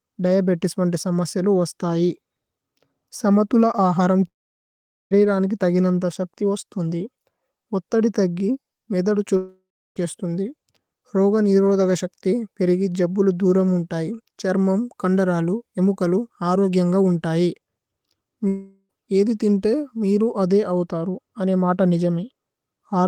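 At 4.27 s the speech cuts out until 5.14 s. A short fading buzz is followed by near silence for about 0.81 s. At 9.37 s it happens again, to 9.99 s, with about 0.34 s of silence after the fade. At 18.48 s a third gap runs to 18.92 s, mostly filled by the fading tail, before "ഏദി തിന്തി മിരു". Each points to a likely long network dropout. Roughly 0.4 to 0.8 s of speech is lost each time.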